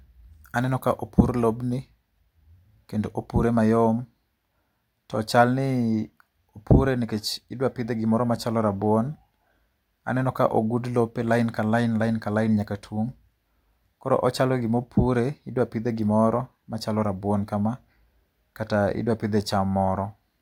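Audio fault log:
No faults can be heard anywhere in this speech recording. Nothing in it calls for an entry in the log.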